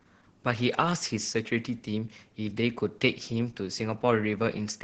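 Speech, with heavy Opus voice compression throughout: muffled, hoarse, slightly robotic, which fits SILK at around 10 kbps; a spectrogram shows energy cut off near 8 kHz with smeared, blotchy harmonics.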